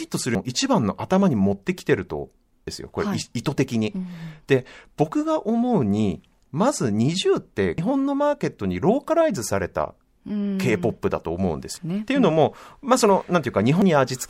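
At 0.35, 2.67, 7.78, 11.77 and 13.82 s, damaged data in the compressed stream makes the decoder misread frames and lose sync. The result is brief chirps or blips in the speech, each showing as a thin vertical smear on the spectrogram and a sharp glitch in the waveform.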